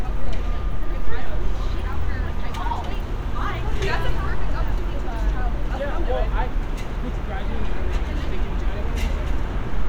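No technical faults are audible anywhere in this recording of sounds.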